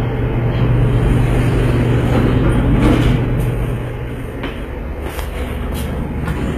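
Throughout the clip, the treble is likely being rebuilt by HE-AAC compression rather than carried through, with the encoder coding only the lower spectrum and copying those bands upward under a coarse envelope. The plainly audible damage fits a very low bitrate around 20 kbps. The top end reaches high but its harmonics no longer line up with the lows, so hissy and sharp sounds turn gritty and metallic, and nothing survives above 14.8 kHz.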